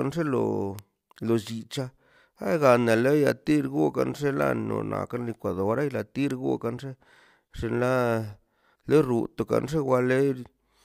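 A bit error spike occurs three times in this speech, at 0.79 s, 4.42 s and 6.31 s. Each time, a single bit in the digital data flipped, throwing the sample value off by a power of two before it snapped straight back. The first affects just one sample, and the later two span a run of about three. Each is heard as a brief, sharp tick with broadband energy, unrelated to the speech around it.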